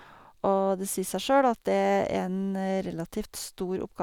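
A speech recording, and nothing in it is technically wrong.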